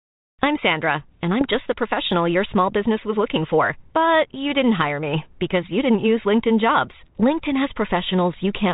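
A speech recording carries a short patch of popping and rough, gritty distortion between 1.41 and 1.54 s, with the level briefly jumping around. These are bit errors on an ADPCM link. Flipped bits corrupt the coded differences, and because the decoder's adaptive step size and predictor are knocked off track, each error smears on for several milliseconds. The error rate sounds like a small fraction of a percent, and the burst points to four frames being hit, all on top of a G.726 32 kbit/s telephone channel with its light coding grain and band limit at 4 kHz.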